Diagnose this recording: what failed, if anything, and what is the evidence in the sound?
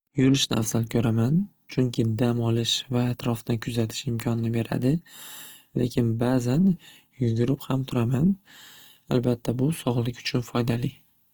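Codec stage, throughout: the speech sounds grainy and rough but keeps full bandwidth to about 20.2 kHz, without MP3-style swirling holes, likely Opus compression in CELT mode near 24 kbps.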